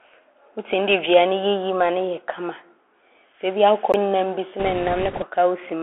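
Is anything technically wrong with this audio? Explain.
Yes, there are three faults.

Bluetooth CVSD headset codec, throughout: the one-bit, slope-tracking encoder confines the speech to roughly 300 Hz to 3.4 kHz, leaving it muffled, with scratchy sibilants and granular hiss.

CD skip, at 3.92 s: the player's pickup jumped tracks, so a tick and a very brief mute mark where the speech resumes from a different point.

Bit errors on a Bluetooth voice link, from 4.59 to 5.25 s: flipped bits, at a rate of a few percent, put a rushing crackle over the speech rather than loud clicks.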